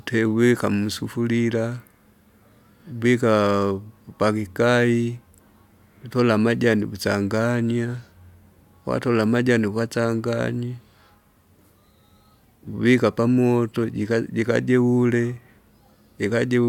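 No technical faults can be heard anywhere here.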